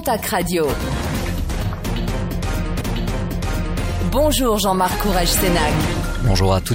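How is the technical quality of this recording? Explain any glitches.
One glitch stands out. From 2.80 to 3.80 s a stream segment is repeated: the player fetched or queued the same second twice, so audio replays after a small blip. Unlike a short stutter, a full second recurs.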